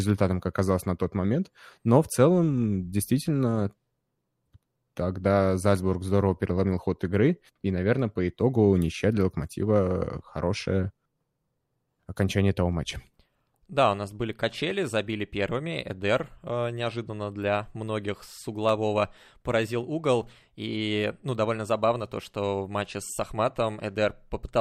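At 12.73 s and again at 18.69 s there's a single sharp click, the signature of dropped samples. The likely cause is a tiny fraction of a millisecond going missing, so the waveform jumps straight to a later value and produces that thin spike without losing any audible speech.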